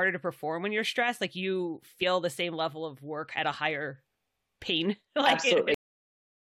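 At 5.74 s the speech has a cut-off end: the final stretch of audio was never written, so the sound stops mid-syllable and drops straight to digital silence for the remaining 0.7 s. Unlike a fade-out or a natural pause, there is no decay or room tail at all.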